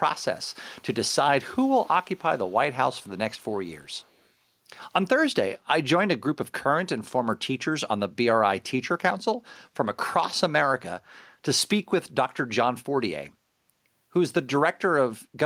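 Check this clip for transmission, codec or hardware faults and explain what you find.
One fault turns up in the speech: echo leak at 1.54–2.24 s, 2.46–2.55 s, 3.02–3.10 s and 3.35–4.29 s. A very faint copy of the speech returns 440 ms late, likely because a loudspeaker's pickup slipped past the echo canceller.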